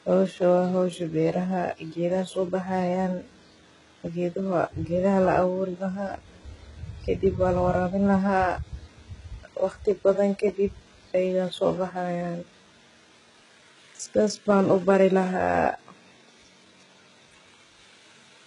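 From start to finish, the speech carries heavy codec damage that points to HE-AAC compression. Nothing sounds above about 11.1 kHz. Below that, the treble does not ring true. It seems copied up from lower bands and shaped only roughly. Harmonics fail to line up across that join. S sounds turn gritty, metallic or lispy. The likely cause is spectral band replication working at a very low bitrate, which fits about 12 kbps.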